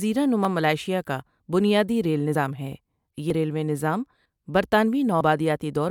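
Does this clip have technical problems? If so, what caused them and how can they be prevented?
Yes. The speech skips at 0.45 s, just before "ملائیشیا کا بنیادی ریل", at 3.30 s, just before "ریلوے نظام", and at 5.21 s. Each time roughly 50 ms is lost and the two sides are butted together with no silence, unlike a dropout. This is likely audio missing between chunks, with the recorder losing a sliver at each 1-second boundary. Prevent it by using gapless, overlapped buffering so one chunk is already recording before the previous one closes.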